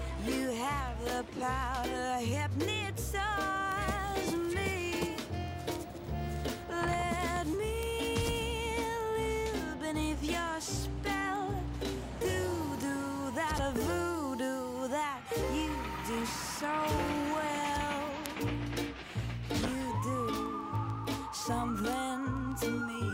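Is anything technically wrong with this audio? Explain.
Yes. Word clock ticks run from 0.19 s to 23.10 s. The receiving device runs on its own clock, and the clocks drift apart by roughly 150 ppm. About every 0.15 s, one sample is dropped or repeated. This gives sharp ticks of uneven strength at a steady rate.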